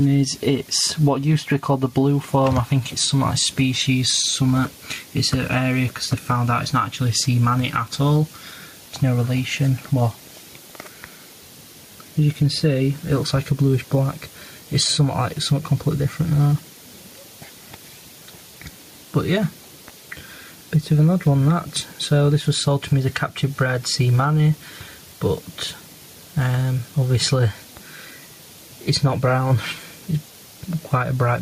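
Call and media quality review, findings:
Gain pumping, throughout. Input gain likely set far too high, with a fast limiter/compressor clamping down on every loud peak. Gain swinging around 5 dB. Dynamics flattened, sound squashed.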